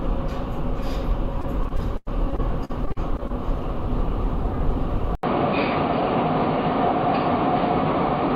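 From 1.41 s to 3.31 s the sound breaks up into repeated packet loss with a robotic sound. Short holes follow one another, the longest 96 ms. Each is patched by stretching the previous sound, so about a fifth of the stretch is concealed, giving a choppy, stuttering texture rather than the clean silences of simple dropouts.

At 5.15 s an 80 ms silence opens, and from there to the end the audio is dull and boxy, with nothing above 4.7 kHz. A new, faint noise floor sits well below the signal, and the level barely changes. The break plus the changed noise points to a likely input switch to a poorer device, not a filter applied afterwards.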